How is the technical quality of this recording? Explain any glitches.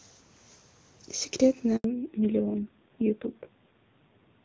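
The call audio is clear at first, then breaks and degrades partway through.

A handover gap runs from 1.76 to 1.84 s. The call switched networks, and for 80 ms no speech frames arrived. The voice fades out quickly. Then there is dead silence. The speech in that stretch is simply lost.

A fallback to narrowband follows from 1.84 s to the end. Before the gap, the HD Voice codec sounds clean, which fits AMR-WB at 23.85 kbit/s. After it, nothing remains above 4 kHz. The speech turns muffled and rough, consistent with AMR-NB at a low rate around 5.9 kbit/s.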